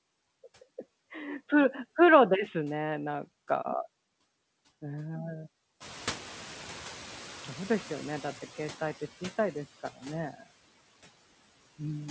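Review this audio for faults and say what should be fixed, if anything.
From 5.8 to 8.85 s the noise suppressor is catching up: room noise jumps about 16 dB near 6 s, and the noise estimate takes 3.05 s to adapt before cutting it by about 10 dB. A faster noise-floor tracker would prevent this.

From 10.33 to 10.47 s speech is cut by the noise suppressor. The speech is treated as noise, attenuated by up to about 13 dB for roughly a tenth of a second, and sounds swallowed. Less aggressive suppression with better speech-presence detection would prevent this.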